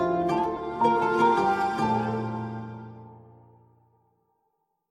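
At 0.56 to 0.58 s, a run of compressed frames was skipped: the decoder never played a stretch of the encoded stream, either because those frames were missing or because they were rejected as damaged. The audio jumps forward by roughly a tenth of a second, which fits about five frames of around 23.2 ms each. The sound lurches abruptly ahead.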